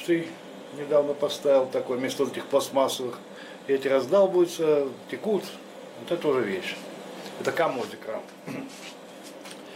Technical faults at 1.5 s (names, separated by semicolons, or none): none